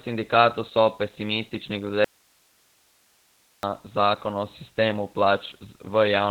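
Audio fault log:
throughout: Opus voice compression. Nothing remains above 4.4 kHz, and the speech sounds muffled, hoarse and faintly robotic. This fits a narrowband SILK linear-prediction coder at around 8 kbps, which models the voice tract but codes its excitation coarsely.
2.04–3.63 s: audio dropout to a faint residue. Just after "sindikatu so pesimistični glede", the speech cuts off abruptly for 1.59 s, leaving only hiss some 40 dB down. It returns at "zakon o sistemu". The signal was likely lost upstream while the path after the break stayed live.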